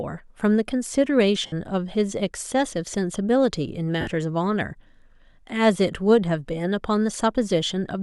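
Speech here, with lost LE Audio frames twice, at 1.46 s and 4.01 s, each gap about 60 ms where the decoder repeats the last spectrum with scrambled signs, leaving a brief noisy smear.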